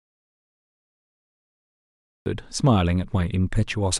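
From the very start until 2.26 s there is an audio dropout to silence. It is already under way when the clip begins. The gap is silent, with no room tone. The input was likely lost, with silence recorded. Speech then begins mid-flow.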